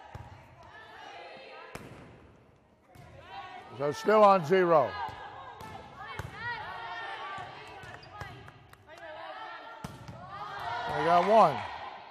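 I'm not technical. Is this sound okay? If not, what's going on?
No. At 9.15 s there is a brief blip caused by damaged data in a compressed stream: corrupted file bytes made the decoder misread that moment.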